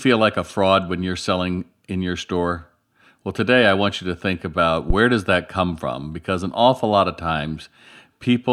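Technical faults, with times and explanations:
4.90 to 4.96 s, phantom power thump: a deep thump lands after "you to think about" and before "does that come from". It peaks at about -5 dBFS and decays within 12 ms. Switching the supply on a live input pushes a voltage step through the coupling capacitors.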